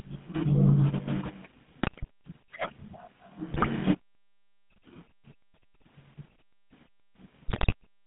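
A buzzy, gravelly roughness runs through the whole speech clip, confined to roughly 150 Hz to 3.5 kHz. This is the GSM full-rate codec, whose pulse-driven vocal-tract model fits a 13 kbps coder. From 1.83 to 2.05 s, 3.54 to 3.67 s and 7.48 to 7.73 s, the speech breaks into squawks, pops and gargling. These are GSM bit errors: corrupted filter, pitch and gain values distort the spectrum and level for a run of frames, and the last burst has the highest bit error rate, 4.87%.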